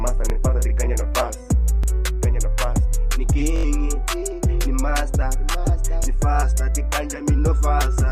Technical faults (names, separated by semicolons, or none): repeated buffer